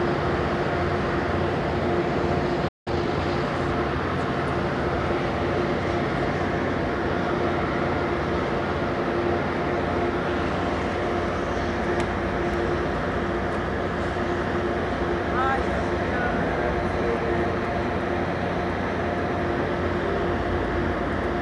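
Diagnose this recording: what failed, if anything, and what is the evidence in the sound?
A playback stall hits the buffer stage. The sound stops mid-flow at 2.68 s and stays silent for about 179 ms, resuming around 2.88 s. The likely cause is the player running out of data or its thread being blocked until it recovered.

Time-compressed catch-up follows immediately, from 2.88 to 3.22 s. The audio runs at 1.5 times normal speed while keeping its normal pitch. The player trims its backlog by cutting out small pieces and cross-fading the remainder together.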